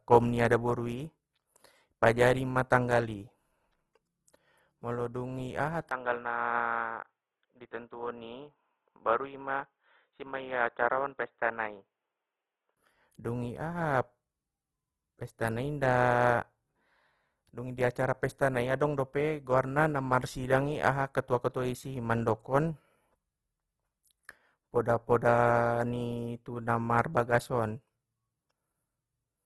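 From start to end, the speech carries Opus compression damage, and it is plainly audible. The likely cause is Opus in its music mode at a low rate, which fits something around 16 kbps. Nothing comes through above 12.2 kHz. With too few bits, the encoder fills bands with folded or noisy content instead of leaving gaps. So the speech sounds rough and grainy rather than swirly. Tonal parts of the voice turn noisy.

At 5.89 s the input switched to a poorer device. The likely cause is the system changing to another microphone or a headset call profile. A 20 ms silence marks the switch. Then the sound goes dull and boxy, with nothing above 3.8 kHz. The level drops a few decibels. A faint new background noise sits well below the speech. At 12.77 s the original input returns, and the brighter, fuller sound comes back.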